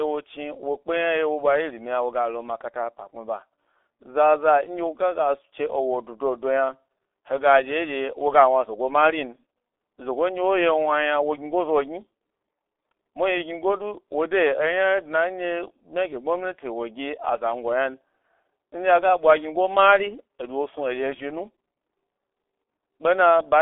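From start to end, the speech carries heavy G.723.1 codec damage. Nothing passes above 3.8 kHz, so it sounds muffled and hoarse. Consonants blur, which fits a rate near 6.3 kbit/s.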